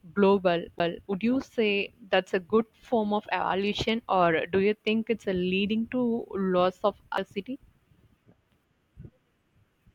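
At 0.79 s and 7.17 s, CD skips: the laser jumps tracks, giving a very brief mute and tick, then a discontinuous waveform and abrupt spectrogram seam.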